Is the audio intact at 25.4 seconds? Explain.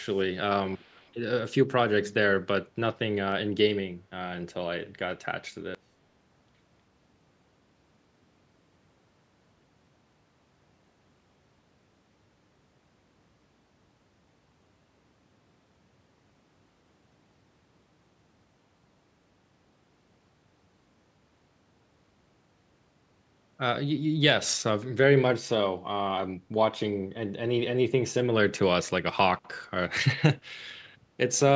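Yes, the speech at 25.4 s is intact, with no dropout, glitch or other fault at that moment.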